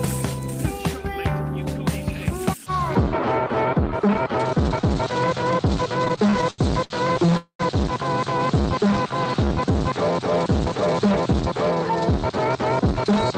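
The audio suffers a chain of network playout faults from about its midpoint on. From 6.05 to 7.33 s there are repeated stalls (stutter): twelve brief gaps, the longest 78 ms, are filled by continuing the last sound. Packets kept arriving late, so the buffer kept running dry. About 278 ms is padded in, and nothing is lost. At 7.37 s a call audio freeze follows, lasting until 7.61 s. The last sound is held for about 223 ms, ending in 100 ms of silence, before playback resumes where it stopped. The likely cause is packets held up in transit, emptying the jitter buffer. From 8.62 to 9.73 s a jitter buffer slow-down plays the sound at 93% speed without changing its pitch. Repeated short periods add 92 ms to rebuild the reserve. From 11.92 to 13.33 s a jitter buffer speed-up runs at 106% speed. Trimming about a tenth of a second makes the sound feel hurried while keeping its pitch.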